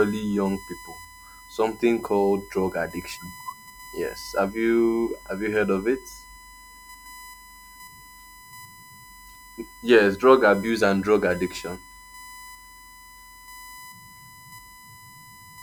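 A steady USB whine runs through the whole recording, a fixed-pitch tone at 1 kHz that sits roughly 25 dB below the speech. Its pitch points to the bus's 1 ms frame rate: the interface draws current in bursts once per frame, and that periodic load couples into the audio path through shared power or ground, leaving a thin, constant whistle under the speech.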